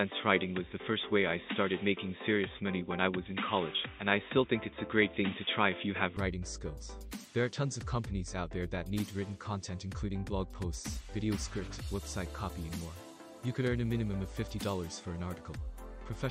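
From the start of the audio to 6.17 s, the sound is dull and boxy, with nothing above 3.8 kHz, a background noise floor roughly 40 dB under the signal, and a level about 5 dB different from what follows. At 6.17 s the full bandwidth returns abruptly, with no silence at the transition. The likely cause is an input switched to a poorer device, such as a second microphone or a headset's narrowband call profile, before recording moved to the better input.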